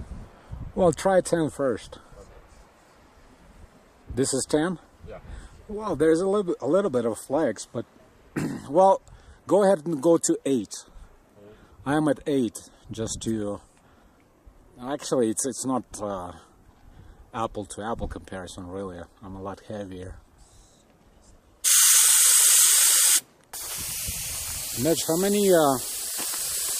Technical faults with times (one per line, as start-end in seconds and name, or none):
25.50-26.80 low bit depth with noise shaping